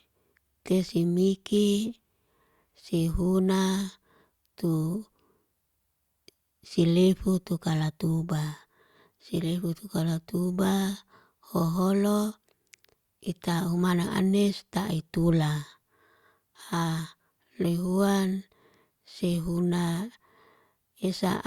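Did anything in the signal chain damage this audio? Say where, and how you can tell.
No, nothing in the signal chain damaged this audio.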